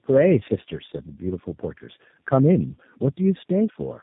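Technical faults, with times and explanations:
Throughout: tandem speech coding. The speech passes through three low-rate speech coders in a row, AMR-NB at 7.95 kbit/s, G.723.1 at 6.3 kbit/s, then G.729A at 8 kbit/s, with G.711 links between them. Each coder models the previous coder's already distorted output, so errors compound into a rough, muffled, warbling quality worse than any one of them would cause. Nothing above about 3.8 kHz survives. Plain band-limiting would only dull the sound, without the stacked roughness and warble.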